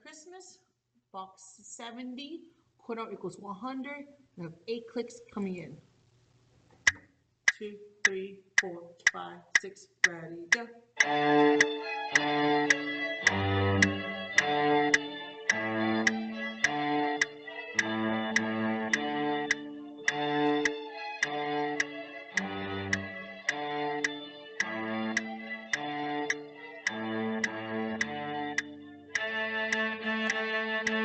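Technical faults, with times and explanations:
No technical faults heard.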